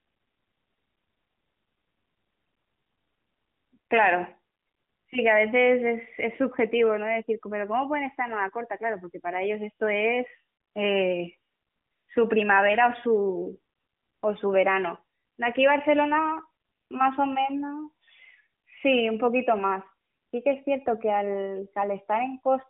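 No technical faults can be heard anywhere in the speech. The AMR narrowband mobile codec path is audible as a telephone-style band running from about 150 Hz up to about 3.5 kHz with nothing above 3.7 kHz, and its light codec colouring fits AMR-NB's top 12.2 kbps mode.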